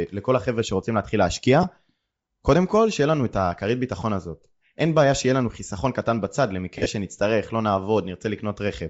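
Throughout, the speech has a breathy, grainy edge, and the top of the band sounds thin and hissy. This is Bluetooth LC3 compression, likely at a low bitrate, around 32 kbps. The codec drops much upper-band detail and fills it with noise. The damage is plainly audible.

From 1.63 to 1.65 s there are lost LE Audio frames. The gap fits a single 10 ms frame. The decoder repeats the last spectrum with scrambled signs, so a brief noisy smear replaces the sound.

From 6.78 to 6.86 s more LE Audio frames are lost. About 70 ms is missing, scattered over 80 ms, with the longest run near 40 ms. The concealment turns the sound into a rough, noisy blur that starts to fade.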